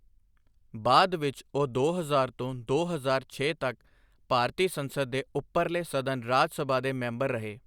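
Nothing technical goes wrong anywhere in this speech recording, so there's no fault to point to.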